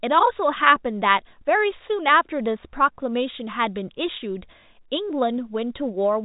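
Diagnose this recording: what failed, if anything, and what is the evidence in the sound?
Nothing has gone wrong here; the speech comes through the usual G.711 telephone coding, so the band stops at 3.8 kHz, and that's simply how the format sounds rather than anything to chase.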